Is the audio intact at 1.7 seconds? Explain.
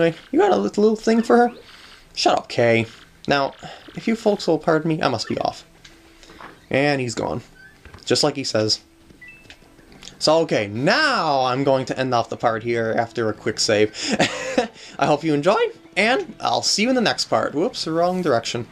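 Yes, at 1.7 seconds the audio plays through cleanly, with no dropout, click, distortion or other technical fault at that moment.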